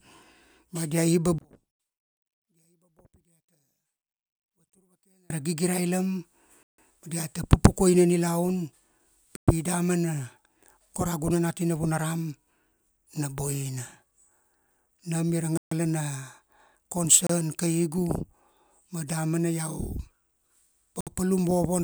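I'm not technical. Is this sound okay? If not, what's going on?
No. From about 1.38 to 5.30 s, just before "ra gigirailam", the speech almost disappears. That's most likely one channel inverted: one side of the stereo is flipped, so when both sides are combined into one, the shared voice cancels itself out.

Then there are five short dropouts to silence, at 6.63–6.78 s (right after "ra gigirailam"), 9.36–9.48 s, 15.57–15.71 s (after "ia ra"), 17.27–17.30 s and 21.01–21.07 s. Each lasts from a blink to about a sixth of a second. These are likely a Bluetooth stall, where the wireless link briefly runs out of audio.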